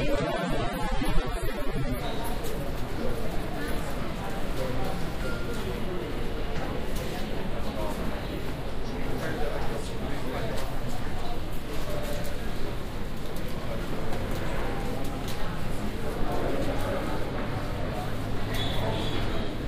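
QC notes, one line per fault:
0.0–2.0 s, adaptive stream starting at a low bitrate: the opening sounds thin and smeared, with a dull, synthetic top end and heavier codec artefacts, then it snaps to a cleaner, fuller sound at 2.0 s with no gap. That fits a player opening on something like a 24 kbit/s AAC version to start fast, then switching to a 96 kbit/s one once it has gauged the connection. Nothing above 14.4 kHz.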